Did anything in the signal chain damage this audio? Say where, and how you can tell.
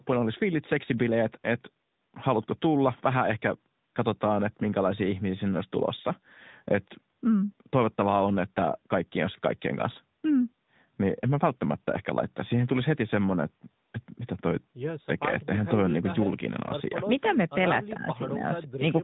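Yes. Across the whole clip the speech sounds buzzy and synthetic, and nothing above 3.8 kHz survives. The culprit is the codec stage, the AMR narrowband mobile codec. It samples at 8 kHz and rebuilds speech from a vocal-tract model excited by a few pulses per subframe. The plainly audible coarseness fits a mid-rate mode around 10 kbps. The call microphone processing before it worked normally; its high-pass filter only took out the lowest bass.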